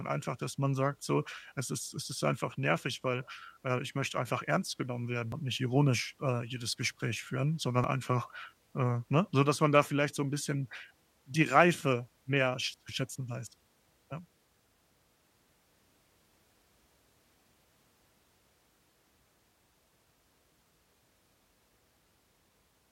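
Small skips occur at 5.32 s, after "einfach ernst genommen werden", at 7.84 s, before "einfach äh ne", and at 16.08 s. Each is likely a dropped buffer (overrun). Roughly 20 ms, then about 10 ms twice, vanish, and the joined edges snap together.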